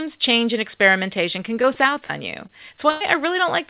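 From 1.62 to 2.11 s, right after "change and experimentation can", the speech turns choppy and robotic, with four short holes and none longer than about 46 ms. This is repeated packet loss: each missing piece is patched by extending the last sound, and the patches crowd together.

At 2.47 to 2.51 s there is a brief smear or wobble where a sliver of sound drops out. This is short concealed packet loss. About 20 ms never arrived in time and was covered by continuing the preceding sound before blending back into the real audio.

From 2.91 to 3.02 s the sound stretches into a held, fading buzz or hiss, then resumes further along with roughly 100 ms missing. This is a burst of packet loss: several consecutive packets were lost or came too late. The receiver prolonged the last sound and faded it until real audio returned, all within a call path whose G.711 coding leaves nothing above 4 kHz.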